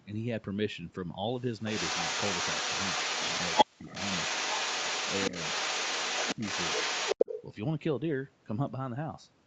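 From 1.65 to 3.65 s, and again from 3.85 to 7.42 s, there is echo leak: a copy of the speech returns 392 ms late at roughly the same level as the original. The likely cause is a loudspeaker-side echo canceller letting its microphone pickup through. On a spectrogram the harmonic patterns repeat, offset by about 0.39 s, and the waveform shows overlapping, doubled envelopes.

At 3.64 to 3.89 s, and briefly at 6.36 to 6.43 s, the speech is suppressed in double talk. Level dips by about 40 dB in the first event and about 15 dB in the second, likely because the canceller turned down the near talker along with the echo. These appear as vertical gaps or fades in the spectrogram and as pinched sections in the waveform, while the band above 8 kHz stays empty throughout.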